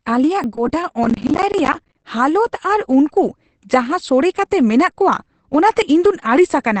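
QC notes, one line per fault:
Throughout, Opus compression: muffled, hoarse and band-limited, with nothing above 8 kHz. That's likely the speech-mode SILK coder at a low rate, around 12 kbps.
0.44, 1.86 and 5.82 s, dropped buffer (overrun): the sound jumps ahead with no gap, losing about 20 ms, or about 40 ms at 1.86 s, likely as chunks get overwritten before being read.
1.04 to 2.04 s, processor overload crackle: gritty tearing from dozens of missed deadlines, each leaving a hard-edged silent gap that fits roughly 10 ms buffers.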